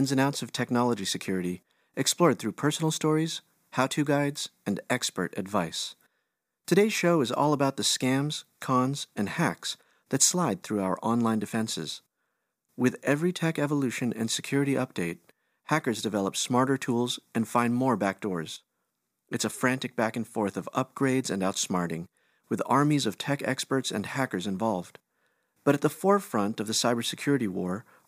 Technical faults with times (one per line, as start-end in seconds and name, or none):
none